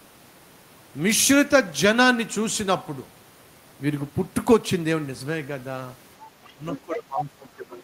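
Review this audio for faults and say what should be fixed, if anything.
Other side's voice leaking through: second-voice scraps at 6.46–6.52 s (about 35 dB down), 6.71–6.78 s (about 15 dB) and 7.18–7.24 s (about 10 dB), likely residual loudspeaker echo; spectrograms show harmonic streaks.

Speech suppressed in double talk: the talker dips by up to about 15 dB at 6.56–6.66 s and again from 6.82 s to the end, where the echo canceller likely ducks both voices; waveform shows a flattened envelope.

Better double-talk detection and stronger residual echo suppression, or a headset, would prevent both.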